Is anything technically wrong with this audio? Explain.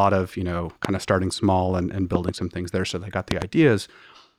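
Yes. Three loud pops: a single sharp one at 0.85 to 0.87 s after "of you know", a double at 2.15 to 2.31 s after "starting small and and", and a stronger double at 3.31 to 3.44 s after "they got". Each stands well above the speech, which continues underneath. The likely cause is a sudden voltage step, such as a switch, static or a driver glitch, reaching the signal path.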